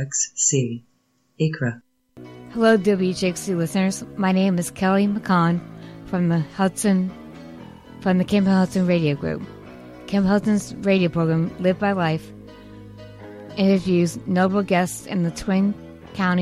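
Nothing stood out on listening; no technical fault could be heard anywhere in the audio.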